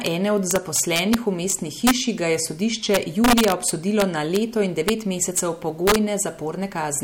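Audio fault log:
0.06 s, 0.51–1.14 s, 1.5 s, 1.87–1.91 s, 2.94–4.36 s, 4.88–5.39 s and 5.87–5.96 s: integer overflow. Speech peaks went about 1 to 4 dB past the integer limit. They were not held there but wrapped to the opposite sign. Each wrap leaps across the full range, giving violent cracks on loud syllables.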